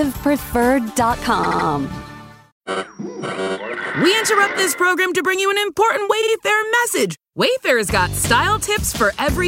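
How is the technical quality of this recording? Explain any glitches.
Two short stutters mar the audio, both from repeated frames. At 1.43 s, a 78 ms block replays three times, adding 0.24 s. At 6.21 s, a 52 ms block replays twice, adding 0.10 s. Compressed data was duplicated, so the decoder plays each snippet again.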